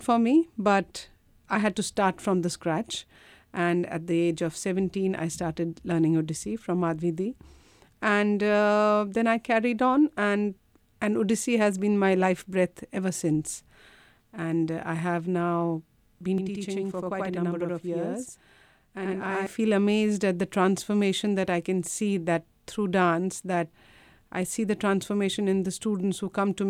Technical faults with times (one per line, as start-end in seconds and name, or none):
16.38-19.47 channel delay (doubling)